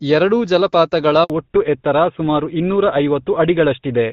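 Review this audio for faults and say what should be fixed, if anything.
Handover gap, 1.24 to 1.30 s: just after "ಎರಡೂ ಜಲಪಾತಗಳ", the speech fades out within a few tens of milliseconds and stays silent for 60 ms. The call was being moved between networks, and no speech frames arrived until the new link came up, so that stretch of speech is gone. To prevent it, the network should use a make-before-break handover, keeping the old link carrying frames until the new one is established.

Fallback to narrowband, 1.30 s to the end: from the same point, everything above 4 kHz disappears. Before the switch, the speech has the fuller band and light coding texture of HD Voice, consistent with AMR-WB at about 12.65 kbit/s. Afterwards it sounds duller and rougher, which points to the call landing on an older GSM full-rate link. To prevent it, the target cell should support AMR-WB, or the handover should favour cells that keep the wideband codec.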